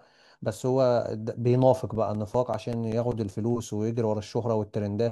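From 1.76 to 3.70 s, eleven CD scratch ticks land at a steady rate of roughly six per second. A scratch defeats the disc's error correction once per revolution, and the player patches the lost samples, leaving clicks of uneven strength, each only a few milliseconds long, visible as thin vertical lines on a spectrogram and small notches in the waveform.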